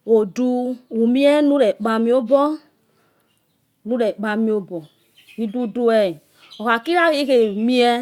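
No technical faults are audible.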